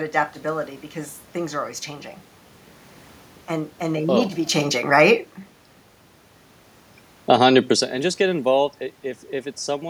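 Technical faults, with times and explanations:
7.15 to 7.51 s, automatic gain falling: The automatic gain control judged the input too loud, or its background noise too strong, and pulled its gain down by about 6 dB over roughly a third of a second. Because the whole signal is scaled, the speech and the room noise behind it sink together, so the level dips as a unit rather than the talker simply sounding farther away. The drop comes just as the talker shifts position at the microphone.
7.42 to 7.84 s, automatic gain rising: Almost immediately the gain control reversed, finding the input too quiet after the talker moved back and the level at the microphone fell by about 13 dB. It raised its gain by about 4 dB across roughly 0.4 s, so speech and room noise swell up together into "and just get involved". The quick fall-then-rise leaves a pumping in the level around 7.5 s.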